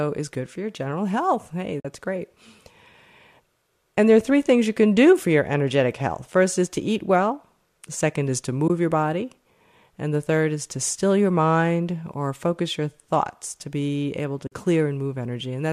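At 1.80 to 1.85 s, at 8.68 to 8.70 s (between "the second is to" and "your body"), and at 14.47 to 14.52 s (just after "to be able to"), the speech drops into short silent gaps of 50, 20 and 50 ms. These are AAC frame loss with muting. The decoder sets the spectrum of each missing frame to zero, and the overlapping windows fade the sound down and back up around each hole. The gap lengths fit frames of about 10 ms, which points to the likely low-delay AAC coding of the stream.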